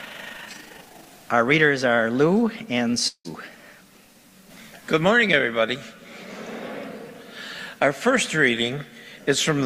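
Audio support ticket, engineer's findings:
Overlap-add ripple, 0.00–1.09 s: rough tremolo near 30 Hz, level swinging about 6 dB per frame. Resynthesis stage; frame overlap not summing to constant gain.

Long network dropout, 3.07–3.28 s: last sound held as fading buzz or hiss, brief silence, then resumption with a gap. Likely transport loss; concealment covered part before giving out.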